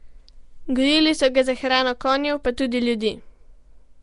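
From start to finish, the speech carries a rough, hissy halo. It sounds smeared and underwater. Nothing reaches above 10.6 kHz. This is likely Nellymoser compression, the Flash codec, at around 44 kbps. Its coarse bit budget leaves weak bands empty and fills them with noise.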